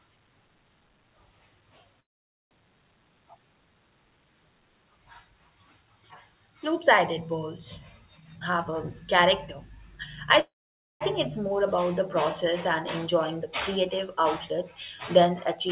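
At 2.0 to 2.54 s there is a call audio freeze. The sound stops for about half a second, mostly silent. Packets were likely delayed and the jitter buffer ran dry. Nothing is lost; a gap is inserted.

From 8.18 to 8.78 s comes a jitter buffer speed-up. The speech plays about 58% faster at normal pitch and sounds hurried. Short pitch-period pieces, around 0.4 s in total, are cut to shed excess delay.

At 10.39 to 11.03 s, just before "think it's", a second freeze stalls the audio for about 0.6 s, again mostly silence.

Throughout, nothing above 4 kHz, which fits a G.711 A-law call codec.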